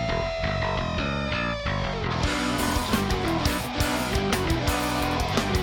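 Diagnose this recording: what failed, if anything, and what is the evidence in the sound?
Nothing failed in this recording, and the sound gives no evidence of any fault.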